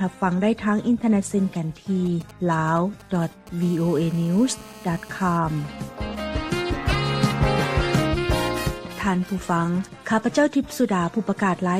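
From 2.06 to 3.49 s there are GSM signalling bursts. A 2G phone close to the recording chain is transmitting only short groups of radio bursts, and some stage of the audio circuit rectifies that RF energy into the signal path. The result is a galloping dit-dit-dit of brief buzzes pulsing at about 217 Hz, roughly 20 dB below the sound and unrelated to it.

At 3.62 s the interference changes into a GSM phone buzz that lasts until 5.37 s. The phone is now in a call, transmitting bursts continuously at 216.7 Hz, and the rectified pulse train produces a hard, raspy buzz at that fundamental with a dense series of harmonics. The buzz holds nearly steady, sitting about 21 dB below the signal and bearing no relation to the underlying sound.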